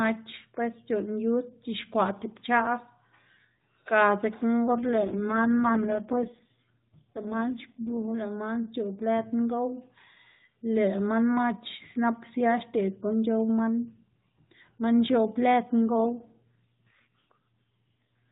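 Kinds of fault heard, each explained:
AMR rate drop: The speech turns buzzier and more synthetic from 4.68 to 8.08 s and again after "man x̱oꞌb lëd" at 15.98 s through the end, which fits the codec stepping down from 12.2 to 4.75 kbps. Unlike dropouts or a bandwidth cut, there are no gaps and the narrowband range stays the same.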